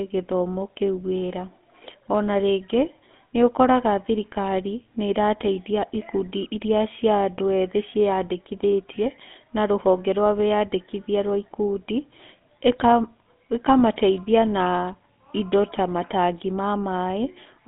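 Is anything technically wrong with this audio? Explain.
Yes. The whole clip has been through a GSM full-rate codec, the original mobile phone speech coder. It models the vocal tract as a filter and feeds it a sparse train of regularly spaced pulses instead of the real excitation. That thin residual, which fits a 13 kbps rate, leaves the speech plainly buzzy and gravelly. The sound sits in a phone-line band of roughly 200 Hz to 3.5 kHz, with nothing above 3.8 kHz.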